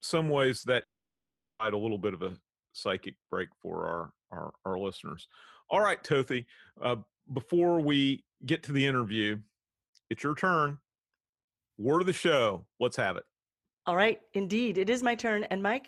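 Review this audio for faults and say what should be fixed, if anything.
At 0.59 to 0.66 s there is short concealed packet loss. About 40 ms of speech arrived too late to decode. The receiver continued the previous sound to bridge the gap, then blended back in. It sounds like a brief smear. Forward error correction and a slightly deeper jitter buffer would prevent it.

From 0.83 to 1.62 s the speech drops out and resumes on "a little bit of". This is likely a long network dropout. About 760 ms of audio was lost. A very short fading fill gives way to 740 ms of silence, and that speech is gone. A more stable connection with redundancy and retransmission would prevent it.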